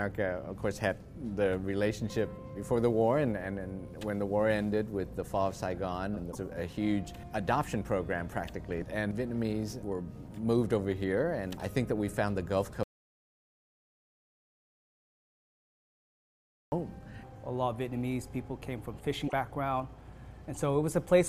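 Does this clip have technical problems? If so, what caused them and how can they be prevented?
Yes. At 6.31 to 6.35 s and again at 19.27 to 19.33 s there is a brief glitch where the sound jumps ahead. This is likely a broken MP3 bit reservoir: frames went missing, so the next frames, about 26.1 ms each, decoded using borrowed bytes that belonged to other frames. Keeping the MP3 stream intact during transfer and editing, or cutting only at frame boundaries with reservoir-aware tools, prevents this.

From 12.83 to 16.72 s the audio drops to silence with no room tone, and roughly 3.9 s of material is lost. This is likely an audio dropout to silence, where the input disappeared while the recorder kept writing zeros. Secure connections, stable devices and level monitoring during recording prevent this.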